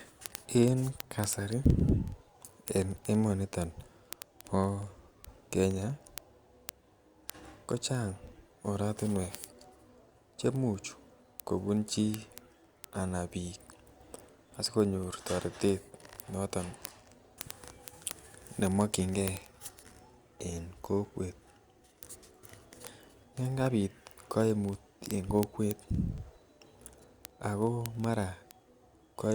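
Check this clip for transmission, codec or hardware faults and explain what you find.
There's one fault here: word clock ticks running through the speech from 0.12 s right to the end. Something receiving the digital link is on its own clock rather than locked to the sender's, and the mismatch looks like a few hundred parts per million. Each time the two clocks slip past each other, a single sample gets dropped or repeated and its neighbours misread. That happens roughly every 50 ms, so you hear hundreds of sharp, uneven ticks.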